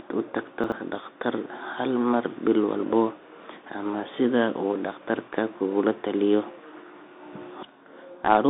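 The whole clip runs through a Bluetooth CVSD headset codec, so the speech is squeezed into roughly 250 Hz to 3.7 kHz, with nothing above 3.8 kHz, scratchy s sounds and a grainy hiss underneath. The one-bit-per-sample delta coding plainly distorts loud high sounds, which fits a 64 kbps link. At 0.64 to 0.72 s there are chunks out of order: a 20 ms piece plays three chunks late, giving a brief jumbled moment.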